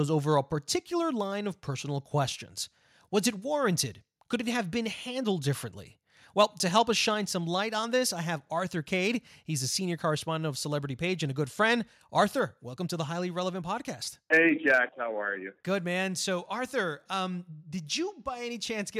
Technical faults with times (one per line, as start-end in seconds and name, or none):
6.76-6.78 microphone overload